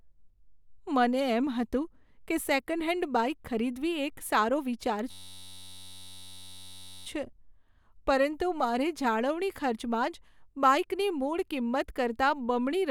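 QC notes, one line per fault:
5.11–7.06 s, system hang loop: a 10.67 ms slice of speech repeats as a steady 93.8 Hz buzz, which fits a stalled 512-sample buffer.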